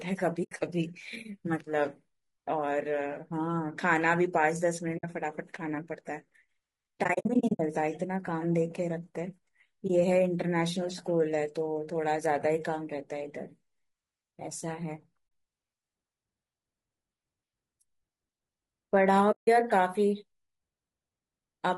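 Throughout the speech, the sound is rough and grainy. Noise fills the gaps between harmonics, and the top band sounds thin and synthetic. This is low-delay AAC compression, likely AAC-ELD, which fits a bitrate near 32 kbps. Its short frames resolve pitch poorly.

The speech also has AAC frame loss with muting. Soft-edged holes open at 0.43–0.52 s, 4.97–5.04 s, 15.27–15.31 s and 19.31–19.48 s, and a brief dip falls at 9.87–9.90 s. From 7.03 to 7.6 s, gaps totalling 320 ms are scattered. Each fades out and back in.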